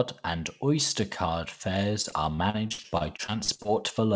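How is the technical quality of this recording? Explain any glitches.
The recording has one clear glitch, a burst of repeated packet loss that gives the speech a robotic sound, heard through a band limit at 8 kHz that fits a G.722 call codec. From 2.02 to 3.69 s, thirteen short gaps, the longest about 61 ms, were patched by stretching the preceding sound, so roughly a fifth of that stretch comes out choppy.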